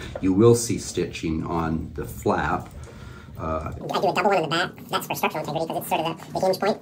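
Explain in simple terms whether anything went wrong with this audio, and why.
From 3.81 s to the end, the sound suddenly races at double speed and an octave higher. This is audio read two samples at a time (double speed).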